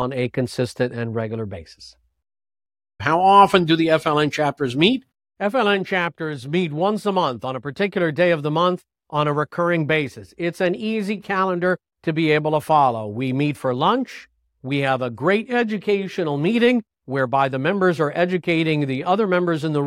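No technical faults are audible anywhere in the speech recording.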